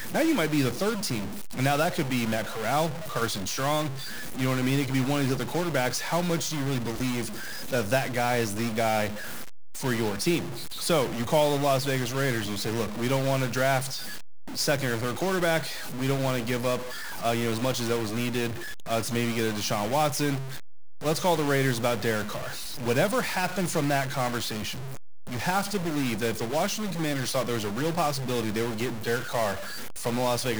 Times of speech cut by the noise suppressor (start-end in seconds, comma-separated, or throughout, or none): none